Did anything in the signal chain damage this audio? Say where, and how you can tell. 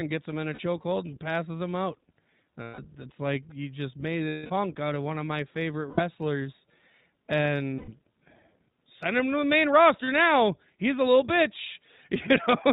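Yes. At the codec stage the whole speech clip carries iLBC codec damage, and it is plainly audible. Nothing passes above 4 kHz, and the voice has a slightly rough, synthetic grain, which fits iLBC's 20 ms frames at its 15.2 kbps mode. A plain band-limiting filter would leave the upper range missing but keep the voice smooth. The roughness here comes from the coarse, frame-by-frame coding of the excitation.

At the network stage there are lost iLBC frames at 0.54–0.60 s, 2.62–2.80 s, 4.28–4.51 s, 5.90–6.01 s, 7.78–7.89 s and 10.04–10.09 s. They range from about 40 to 220 ms. Each gap sounds like a held, slightly buzzy vowel, because the decoder repeats the last pitch cycle with noise. It fades in the longest one, at 4.28 s. A plain dropout would be silent. After each gap the voice recovers almost at once, because iLBC frames are decoded independently.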